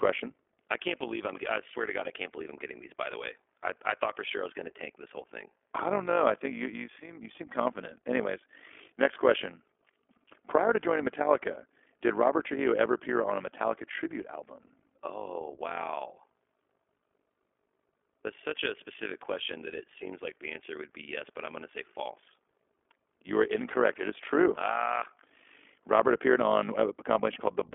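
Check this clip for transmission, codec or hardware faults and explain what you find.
Two faults run through the whole speech clip: iLBC codec coding and an overlap-add ripple.

The iLBC codec damage is plainly audible for the full length. The speech sounds thin, slightly rough and synthetic, with a telephone-band quality from about 300 Hz to 3.4 kHz and nothing above 4 kHz. This narrowband VoIP codec codes each short frame's excitation on its own, and the texture fits its 20 ms frame mode.

The overlap-add ripple is a metallic buzz with extra tones around the voice, the level rippling at around 50 times a second and swinging by about 11 dB throughout. The audio was split into windowed frames and rejoined with overlaps that don't add up to a steady gain, so loudness rises and falls once per frame.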